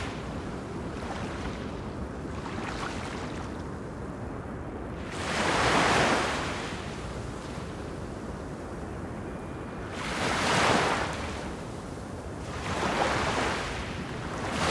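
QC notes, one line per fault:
Throughout: resampler restarted on every block. There's a steady buzz at 100 Hz riding under the sound, only there while something's playing. Each 10 ms chunk was converted in isolation, so at every chunk edge the filter was missing its real neighbouring samples and left a tiny glitch. With edges that close together, the ticks fuse into a tone at the block rate. The conversion looks like a halving, 48 kHz down to 24 kHz.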